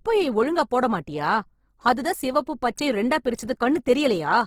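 Opus compression, throughout: the speech sounds grainy and rough, likely from Opus music-mode coding near 16 kbps filling starved bands with folded spectra and noise.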